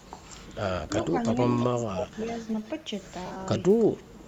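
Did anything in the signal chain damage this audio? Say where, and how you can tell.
Yes. In call processing, the far end's echo canceller likely let loudspeaker pickup through: a copy of the speech about 330 ms late, about 15 to 35 dB down, at 0.0, 0.88–1.07, 1.25–1.34, 2.52–2.71 and 3.79–4.25 s.

Also in call processing, double-talk suppression likely turned the talker down while both sides spoke. The speech dips by up to about 15 dB at 1.46–2.23 s and about 10 dB at 3.92–4.17 s.

On the Bluetooth link, lost LE Audio frames between 3.26 and 3.37 s made the LC3 decoder repeat the last spectrum with scrambled signs. The speech smears into brief noisy texture, with the longest gap around 50 ms.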